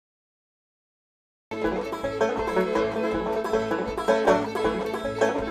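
The clip opens with digital silence that runs to 1.51 s, and the sound then enters abruptly at that point with no attack or fade-in. This is a cut-off start: capture or streaming began late, so the first part of the sound was never recorded and the audio picks up partway through it. The result is a hard, truncated onset where the sound appears already in progress.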